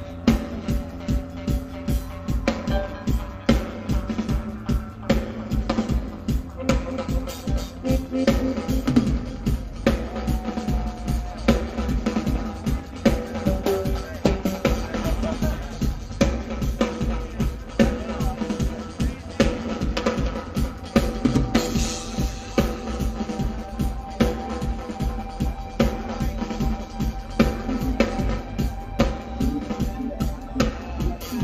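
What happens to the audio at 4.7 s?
At 4.7 s the level shudders rapidly up and down, giving a metallic buzz with extra tones around each note, and the same buzz runs through the whole clip. It is overlap-add ripple: the audio was split into windowed frames and rejoined with an overlap whose windows don't add up to a constant gain, so the level dips and swells by about 6 dB once per frame, at a rate of roughly 150 Hz.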